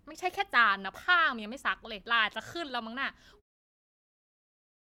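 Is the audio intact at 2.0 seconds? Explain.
Yes, the audio is intact at 2.0 seconds, with no fault at that moment.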